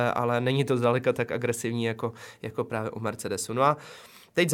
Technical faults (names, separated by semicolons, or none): none